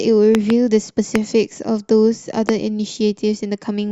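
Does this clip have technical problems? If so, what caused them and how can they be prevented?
Yes. Loud pops sound well above the speech: a double pop from 0.35 to 0.52 s, then single pops at 1.16 and 2.49 s. They are likely voltage spikes from a plug, switch or static. Secure the connections and avoid switching equipment while recording.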